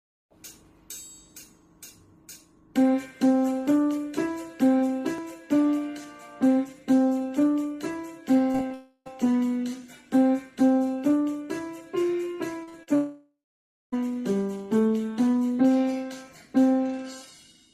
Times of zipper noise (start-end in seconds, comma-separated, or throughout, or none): none